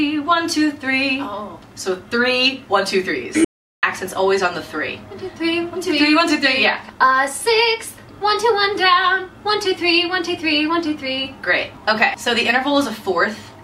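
At 3.45 s the audio drops out to silence for about 0.38 s, resuming at 3.83 s; the gap is silent with no room tone, likely a momentary loss of the input signal.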